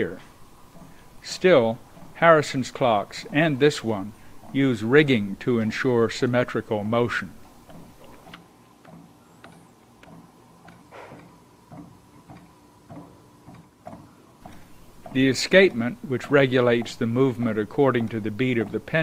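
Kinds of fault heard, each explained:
Adaptive stream at a lower bitrate: from 9.68 to 15.68 s quality drops abruptly, consistent with Opus falling from 64 to 24 kbit/s. Codec artefacts rise. The spectrogram shows the change happen suddenly, while the waveform stays gapless.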